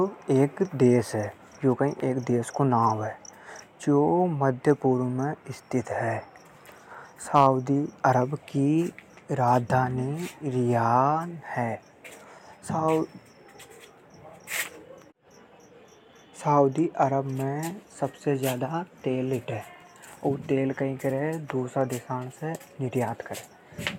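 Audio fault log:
7.35–7.47 s, 8.05–8.09 s, 10.96–11.00 s, 17.03 s: hard clipping, speech peaks exceed the stage's limit, at most about 4 dB over near 7.4 s, and are cut flat, adding high harmonics heard as brief crackle.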